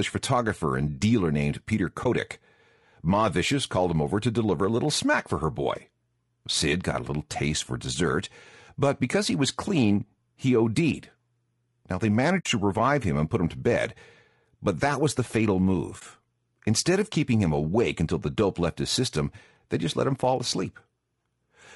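From start to finish the speech sounds rough and grainy, with a hiss-like texture filling the gaps between the harmonics and a top band that seems thin and slightly artificial. This is plainly audible low-delay AAC compression, likely AAC-ELD as used in video calls, at a rate that fits about 32 kbps. At this low bitrate too few bits remain to keep the pitch harmonics clean.

At 2.03 s the sound briefly dips for about 30 ms. The same happens at 12.39 s, just before "to revive him and", where the gap stretches to about 65 ms. It happens again at 15.99 s, right after "that was the fatal", for about 30 ms. These are AAC frame loss with muting: the decoder replaced the missing frames with silence. The short gaps fit one lost frame and the longer one fits three. The overlapping windows ramp the sound down and back up around each gap.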